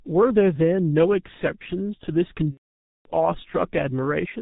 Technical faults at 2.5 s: G.723.1 codec; VoIP packet loss concealed by the speech codec

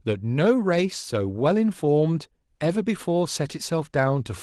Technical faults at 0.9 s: none

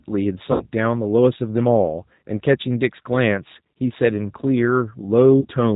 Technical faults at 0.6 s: G.729 codec; VoIP packet loss concealed by the speech codec

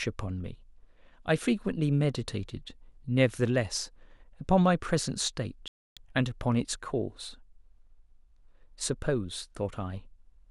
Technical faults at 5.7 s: digital broadcast dropout

